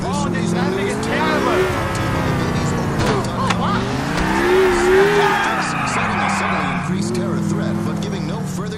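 No technical faults can be heard anywhere in this audio. There is nothing in it that needs a time marked or a closer listen.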